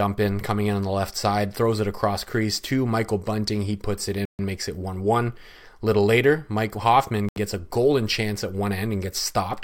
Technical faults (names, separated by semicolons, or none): Bluetooth stall